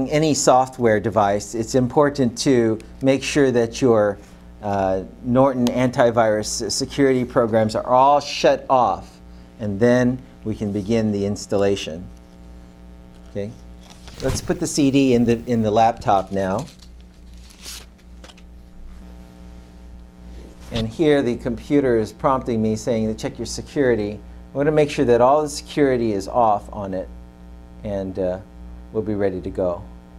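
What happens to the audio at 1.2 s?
Nothing goes wrong at 1.2 s; the audio runs through that moment intact, with no dropout, click or distortion.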